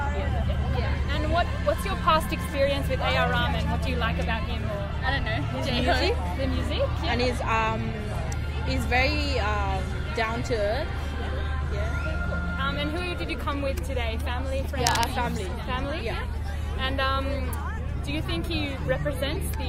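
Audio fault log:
14.83–15.12 s, cable scratch noise: for about 0.3 s a dense, uneven burst of scratching and rustling sits over the sound, only around 5 dB below it and so clearly audible. The crackle is irregular rather than tonal or periodic, which points to a contact whose resistance is jumping around rapidly. The likely cause is a worn cable, connector or control being moved or flexed at that moment, briefly modulating the signal path with noise.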